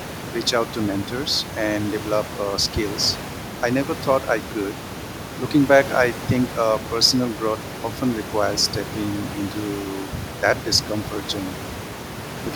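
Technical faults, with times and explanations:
No technical faults can be heard anywhere in this recording.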